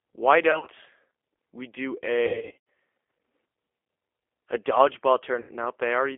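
Throughout, the speech has the sound of the G.729 codec. The band runs from about 300 Hz to 3.4 kHz, so there is no low body and no air on top. The voice is rebuilt from a filter, a pitch predictor and a few pulses per frame. That makes it sound rough and slightly synthetic, which fits an 8 kbit/s G.729A stream. The damage is plainly audible.

VoIP packet loss concealed by the speech codec comes next, at 0.51 to 0.69 s. About 80 ms goes missing in gaps spread over 160 ms, with the longest run 40 ms. The decoder fills each gap by repeating its last pitch and filter at falling gain. The result is a short stretched, fading smear. The second burst follows "we do", from 2.27 to 2.57 s. Here about 300 ms is lost across 400 ms, with runs up to 80 ms. The voice turns into a stretched, fading sound and stays weak after the packets return, because each frame builds on the damaged one before it. The last burst is at 5.40 to 5.50 s, where about 80 ms is concealed in the same way.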